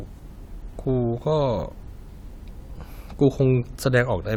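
No dropouts, clipping, glitches or other technical faults can be heard anywhere in this speech recording.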